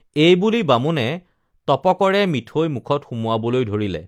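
Nothing stood out on listening to the speech in this recording.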